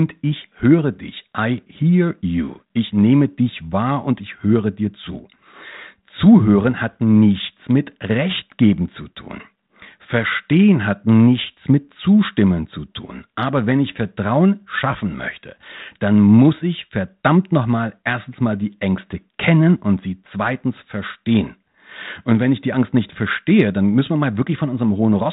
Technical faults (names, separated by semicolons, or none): none